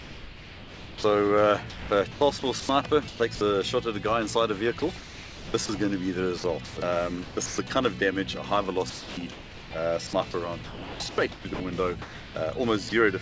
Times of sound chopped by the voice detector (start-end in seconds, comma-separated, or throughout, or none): 1.70-3.41, 4.79-5.69, 6.38-7.70, 8.90-12.35